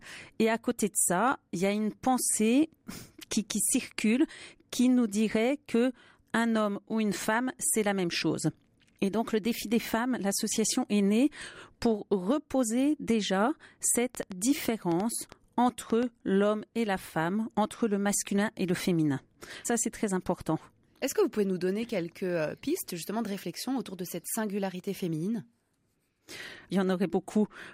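From 13.96 s to 16.04 s, right after "née pour reposer déjà" and before "l'homme et la femme", a train of clicks runs over the speech. About ten sharp pulses arrive, roughly 4.35 per second, at an uneven pace. They all have much the same shape. Peaks stand about 10 dB above the speech, so they tick and pop clearly, even in gaps. The likely cause is interference from nearby equipment or a faulty connection or power supply.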